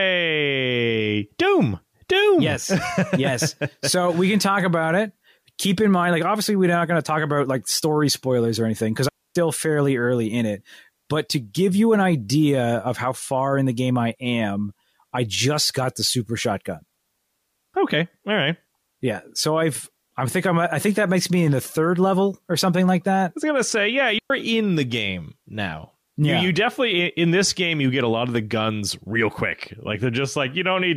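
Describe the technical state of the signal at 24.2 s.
At 24.18 to 24.30 s, between "was gonna say yeah" and "in the game now", a digital wireless dropout mutes the signal for about 0.12 s as the receiver loses data. It sounds like a clean hole, and the waveform shows a flat gap, with a blank vertical band on a spectrogram.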